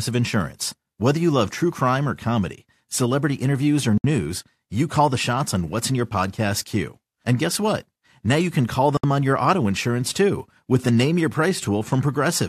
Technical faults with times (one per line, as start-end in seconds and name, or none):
3.98-4.04 gap at a join of encoded pieces
8.97-9.03 gap at a join of encoded pieces